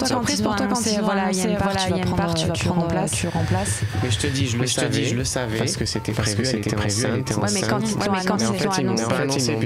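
Throughout, a doubled audio track sounds. A second, equally loud copy trails about half a second behind, dry and full-band. A slower capture path likely caused it.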